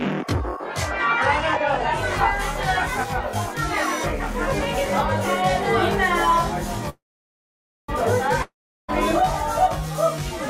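One channel runs about 20 ms behind the other and the two are summed, so channel delay (comb filtering) cuts evenly spaced notches from around 30 Hz upward, leaving the whole clip sounding rough or slightly doubled. From 6.89 to 7.90 s, a call audio freeze likely caused by late packets and an empty jitter buffer extends the last sound as a fading buzz or hiss. About 0.9 s of silence follows, and then the audio resumes exactly where it stopped. From 8.42 to 8.90 s, a long network dropout, likely from audio never arriving, produces a brief fading buzz or hiss and then silence, and about 0.46 s of the sound is lost.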